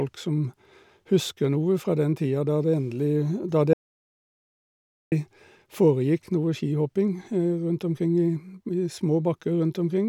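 A speech recording with an audio dropout to silence from 3.73 to 5.12 s, losing about 1.39 s. The speech breaks off mid-flow and the gap is silent with no room tone, unlike a natural pause or noise gate, most likely from the input link briefly failing while recording continued.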